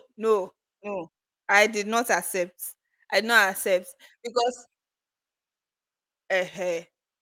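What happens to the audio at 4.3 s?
At 4.3 s the speech sounds slightly hurried, running about 6% fast at unchanged pitch, as part of a jitter buffer speed-up from 1.47 to 4.90 s. The receiver, holding excess buffered audio, repeatedly cut short pitch-period pieces, removing about a fifth of a second in total.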